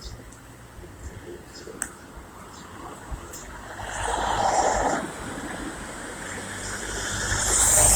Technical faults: Opus compression

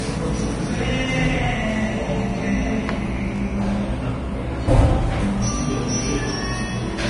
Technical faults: Vorbis compression

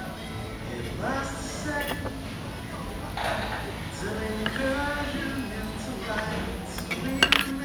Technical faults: none

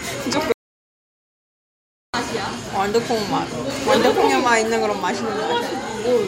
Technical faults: audio dropout to silence

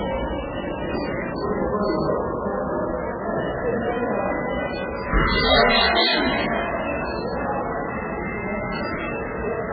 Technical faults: MP3 compression

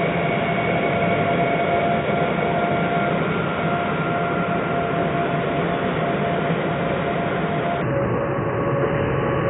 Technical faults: section at the wrong speed

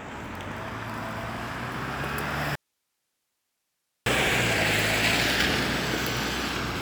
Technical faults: audio dropout to a faint residue

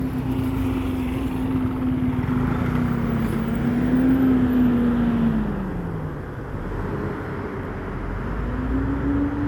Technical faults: generation loss

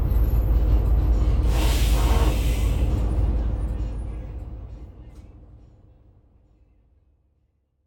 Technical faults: none

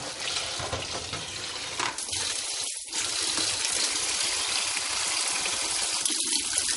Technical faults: MP3 compression; pre-emphasis left on

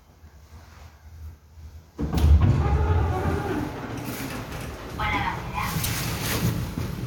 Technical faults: damaged data in a compressed stream

